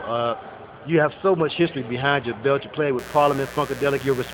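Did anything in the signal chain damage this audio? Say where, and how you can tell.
Yes. Mains buzz enters at 2.99 s and runs to the end of the clip, sitting roughly 15 dB below the signal. The damage happens in the analogue wiring. The buzz rests on a 60 Hz fundamental with a raspy stack of harmonics. Sharp switching spikes, twice per mains cycle, leak in through a dimmer, a rectifier or a missing shield. That produces a 120 Hz repetition and spreads energy well up into the kilohertz range.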